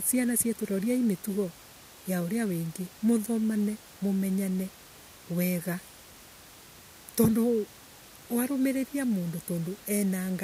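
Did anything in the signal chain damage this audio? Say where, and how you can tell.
No, nothing damaged this audio.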